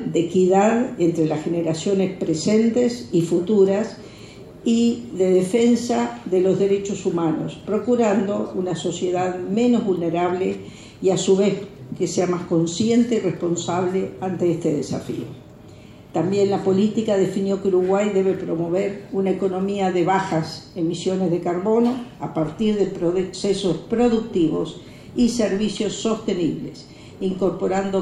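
From 22.41 s to the end, the filter is restarted on every block: its state is discarded at each block boundary, so each block starts from silence with a small transient. The result is a 100 Hz buzz, one tick every 10 ms, rising and falling with the sound's level.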